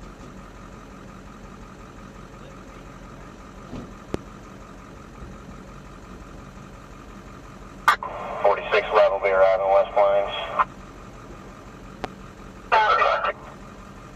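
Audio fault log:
4.14–4.17 s loud pop: a single sharp pop stands about 15 dB above the sound, which carries on beneath it, likely from a brief voltage spike such as a switch or static discharge.
12.04–12.07 s loud pop: another single pop, again roughly 15 dB over the ongoing sound, likely another sudden voltage pulse from a plug, switch or driver glitch.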